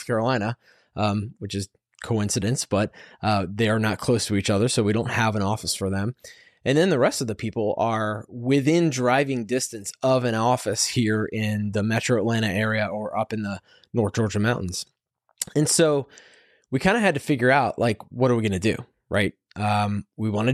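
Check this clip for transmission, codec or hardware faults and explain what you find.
Nothing in the recording stood out as a problem on listening.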